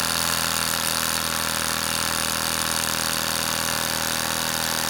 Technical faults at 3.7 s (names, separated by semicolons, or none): repeated frames